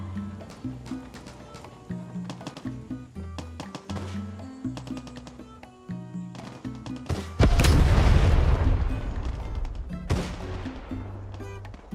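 No technical faults are audible.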